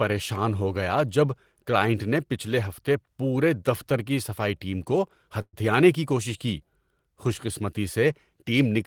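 At 5.41 s, right after "صفائی ٹیم کو", the speech stalls for about 0.15 s in what sounds like a call audio freeze. The last sound gets stretched into a fading buzzy tail, about 116 ms of fill that ends in about 40 ms of silence, before things pick up at "کی کوشش". Likely the packets got held up and the jitter buffer ran dry. Nothing's lost, but everything after runs about 116 ms late.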